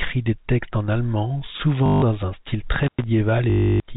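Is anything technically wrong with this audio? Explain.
Yes, the clip has two kinds of fault.

Packet loss with last packet repeated occurs from 1.86 to 2.02 s, between "des textes en allemand" and "un style", and again from 3.50 to 3.80 s. When packets went missing, the receiver kept replaying the last one it had, for 160 ms and then 300 ms. Each copy restarts out of step with the pitch, and the run becomes a robotic stutter with a 50 Hz buzz, which fits 20 ms packets. The gap is filled with repeated sound rather than left silent, which sets it apart from a plain dropout.

An intermittent contact occurs between 2.83 and 3.04 s, just after "un style". A loose connection opened for about 106 ms, so the signal actually disappears instead of being patched. The break is framed by crackle at both edges, and faint hiss remains in the gap. The hard, noisy edges and the silence in between distinguish it from the smooth, buzzing repeats of the packet loss. 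Throughout the clip, the G.711 telephone coding keeps everything below 4 kHz.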